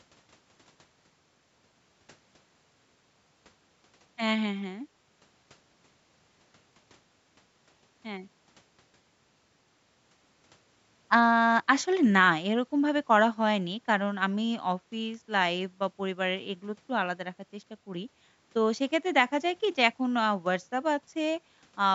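The speech clip has no technical faults. It has passed through a call's microphone processing, which trims away the lowest bass and leaves nothing above 8 kHz.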